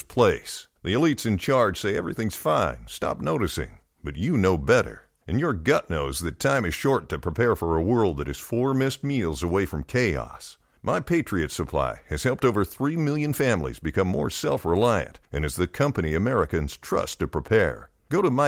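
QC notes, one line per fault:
No faults heard in this speech recording.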